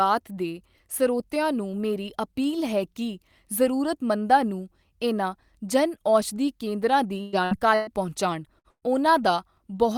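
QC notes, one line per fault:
7.21–7.36 s, 7.45–7.54 s, 7.75–7.90 s, 8.59–8.67 s and 8.70–8.84 s, burst of packet loss: short held buzzes or fading hiss, the last decaying into about 70 ms of silence, then the sound jumps ahead. Each time 60 to 120 ms went missing, and the receiver stretched and faded the last sound to cover the gap.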